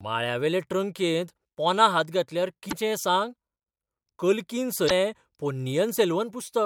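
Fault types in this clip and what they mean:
Damaged data in a compressed stream: two brief glitches break into the speech, at 2.68 to 2.73 s and 4.86 to 4.91 s, each about 50 ms. Corrupted bytes make the decoder misread those frames and lose sync until it finds the next frame header.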